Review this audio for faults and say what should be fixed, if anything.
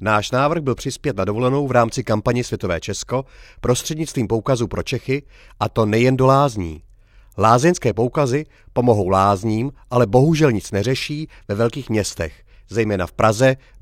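No technical faults can be heard in this speech recording. There is nothing here that needs to be fixed.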